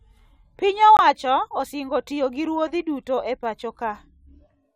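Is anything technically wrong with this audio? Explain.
Yes, there is one corrupt frame muted. From 0.97 to 1.00 s, the decoder rejected a damaged compressed frame and inserted silence: an abrupt 34 ms dropout, which fits one lost frame, visible as a sharp-edged blank gap in the waveform and spectrogram.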